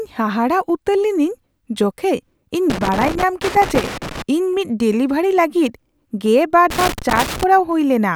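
Loose connector crackle runs from 2.70 to 4.22 s and again from 6.70 to 7.43 s in this speech recording. A worn or dirty contact somewhere in the cable path is intermittently losing and regaining its connection as it shifts, so the signal is chopped on and off many times in quick succession. The result is a ragged, irregular scratching laid over the audio in both stretches, with the second burst shorter than the first.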